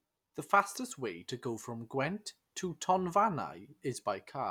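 Nothing in the recording trips up the ear as a technical fault; it simply runs along as speech without anything stepping in to disturb it.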